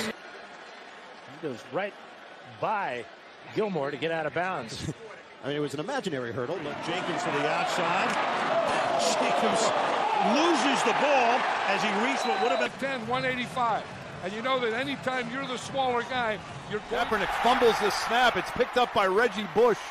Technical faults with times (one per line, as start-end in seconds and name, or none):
none